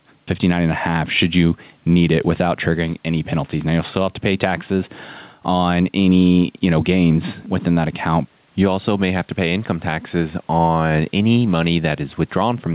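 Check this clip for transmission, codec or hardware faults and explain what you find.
One fault is present: gain pumping, audible across the whole clip. The speech is narrowband, with nothing above 4 kHz, which fits a telephone-grade call codec, and the room noise sits about 43 dB below the speech.

Gain pumping runs from start to end. The level swings by roughly 5 dB as it is pulled down on loud sounds. This is likely caused by microphone gain set too high, with a fast limiter or compressor repeatedly pulling the level down, so the speech sounds squashed and flat in dynamics.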